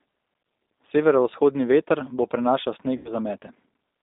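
Speech carrying G.729 codec damage throughout: a narrow 250 Hz to 3.7 kHz band and a rough, synthetic, pulse-built texture, which fits 8 kbit/s G.729A rather than plain band-limiting. From 2.97 to 3.13 s, VoIP packet loss concealed by the speech codec stretches the voice into a fading buzzy tone or coloured noise, unlike a hard dropout to silence. The roughly 80 ms gap points to four lost packets, and the voice stays weak or distorted after the sound returns.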